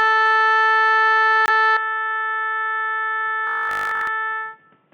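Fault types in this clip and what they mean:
Corrupt frame muted: a damaged compressed frame was rejected by the decoder and replaced with silence, leaving an abrupt 34 ms hole at 1.46 s in the music.
Input switched to a poorer device: from 1.77 s the sound likely comes through a worse input, with a narrower band, dropping about 5 dB, with faint new noise, without any gap.
Robotic sound from repeated short buffers: audio arrived too seldom, so short chunks were likely replayed, giving a rigid 50 Hz buzz between 3.47 and 4.07 s, fitting 20 ms buffers.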